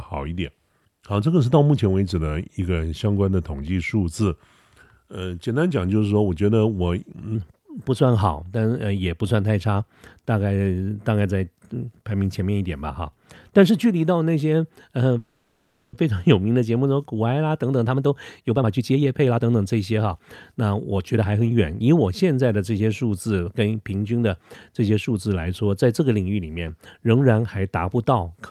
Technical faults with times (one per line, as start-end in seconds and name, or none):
0.00-7.35 section at the wrong speed
15.18-15.95 call audio freeze
17.50-21.41 jitter buffer speed-up